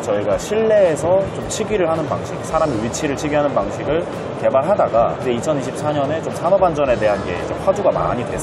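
At 8.0 s, running to about 8.09 s, repeated frames make the sound stutter. A 46.4 ms block, which fits two compressed frames, plays twice more, adding about 93 ms. Unlike a dropout, nothing goes silent: the same fragment recurs.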